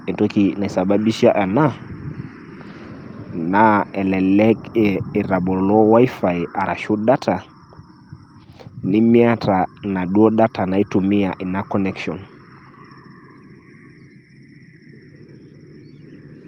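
Nothing in this speech recording points to a technical fault, so there's no problem to track down anywhere along the way.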